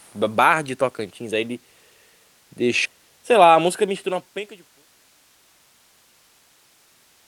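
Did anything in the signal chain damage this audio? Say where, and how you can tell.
Yes. A skip ahead in the network or jitter buffer at 2.85 to 2.87 s discarded about a second and a half of speech, so playback jumps straight across.

A jitter buffer speed-up from 2.99 to 6.70 s cuts out pitch-period slices, shedding about half a second. Speech runs at 113% speed, same pitch, and sounds hurried.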